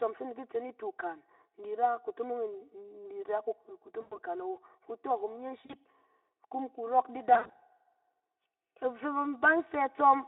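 From start to end, the sound is hollow and phasey. This is channel delay (comb filtering). One channel arrives roughly 3 ms behind the other, and the two are summed to mono. Shared content cancels at evenly spaced frequencies, with the first notch near 200 Hz. That gives a fixed, slightly tubular colour over the narrow telephone band, which the Speex codec limits to about 300 Hz to 3.6 kHz.

VoIP packet loss concealed by the speech codec breaks in three times. From 4.01 to 4.19 s, about 100 ms is missing. The decoder stretches the last sound into a buzzy tone or coloured noise that fades. From 5.65 to 5.74 s, a shorter gap of about 40 ms gives a brief smear. From 7.34 to 7.56 s, losses totalling about 140 ms are scattered, with the longest run near 80 ms. Each time, the sound stays weak or distorted for a moment after the loss ends.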